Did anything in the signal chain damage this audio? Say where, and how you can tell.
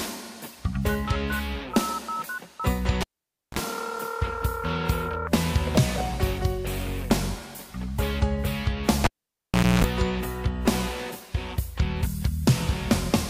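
Yes: at 3.01–3.59 s and 9.04–9.84 s, a pop, near silence, 60 Hz buzz, another pop: a live analogue cable pulled and plugged in.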